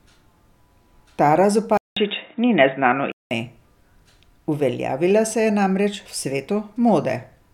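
A speech recording whose input was likely switched to a poorer device from 1.77 to 3.31 s: a 192 ms gap opens at the switch, then the band stops at 3.8 kHz, so the sound turns dull and boxy, shifts by about 5 dB, and carries a new noise floor well below the signal.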